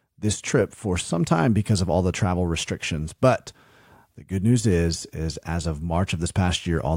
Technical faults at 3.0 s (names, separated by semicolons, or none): none